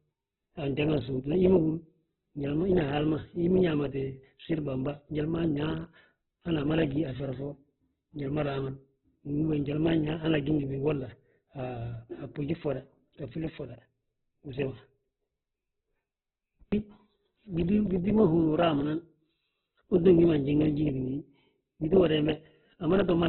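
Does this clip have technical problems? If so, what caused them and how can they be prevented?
Yes. Throughout the speech the sound is grainy, rough and noisy, with nothing above 4.1 kHz. The likely cause is heavy Opus compression in narrowband CELT mode, which points to a bitrate near 8 kbps. With so few bits, bands are filled with noise instead of detail. Encoding at a much higher bitrate keeps the full bandwidth and prevents this.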